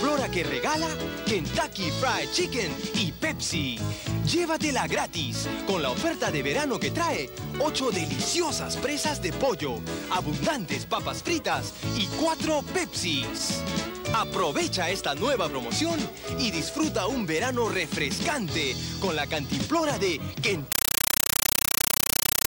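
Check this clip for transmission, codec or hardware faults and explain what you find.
One fault, at the very end. From 20.72 s to 22.48 s the sound gives way to a compressed stream played as audio: data bits from a bitstream link go out as ordinary samples without decoding. The pattern points to an AC-3 (Dolby Digital) stream, which fits a 384 kbps rate. It is heard as chattering static. The waveform shows 8 ms noise bursts separated by flat gaps, repeating 31.25 times a second. The spectrogram shows broadband vertical stripes at that same spacing.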